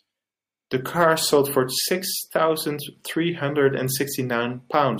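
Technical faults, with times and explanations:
Nothing technical stands out in this bit of speech; there's no glitch or problem to point to anywhere in it.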